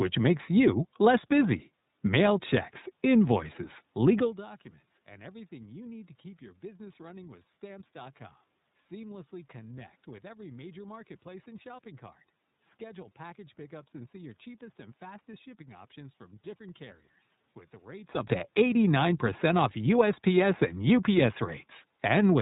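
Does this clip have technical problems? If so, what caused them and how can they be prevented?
Yes. Throughout, the speech passes through the iLBC codec, probably its 13.33 kbps, 30 ms frame mode, so everything above 4 kHz is cut and the voice sounds plainly rough and synthetic. To prevent it, negotiate a wideband codec such as Opus end to end.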